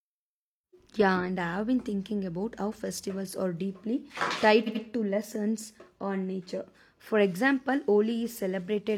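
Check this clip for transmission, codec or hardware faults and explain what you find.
Two faults stand out, both repeated frames in the speech.

At 0.79 to 0.84 s, a 42.7 ms block plays twice, which fits a single compressed frame being sent or written again. At 4.63 to 4.80 s, just before "to lessons on nature", an 85.3 ms block plays three times, which fits a two-frame run. The decoder simply replays what it receives. Each repeat is a short stutter. Together they add about 213 ms to the audio.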